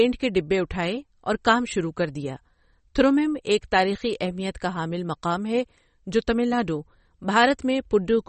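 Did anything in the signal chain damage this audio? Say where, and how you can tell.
Yes: at the codec stage, likely low-bitrate MP3 compression fitting about 32 kbps, the speech loses everything above 8.4 kHz and sounds watery and swirly throughout.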